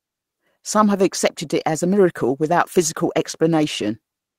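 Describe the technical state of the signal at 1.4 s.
At 1.4 s the speech signal is intact, with no dropout, clipping, glitch or other technical fault audible at that moment.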